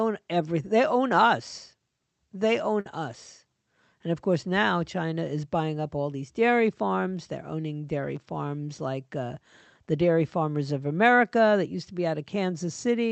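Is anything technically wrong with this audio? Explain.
Yes. A burst of packet loss hits the speech from 2.80 to 2.86 s. Audio packets were lost or arrived too late in the call path. The receiver covered the 50 ms gap by extending and fading the preceding sound, then resumed with 50 ms of speech skipped, heard as a brief held, dimming sound and a small jump. The Opus call coding itself adds its usual coding noise and band-limiting near 8 kHz.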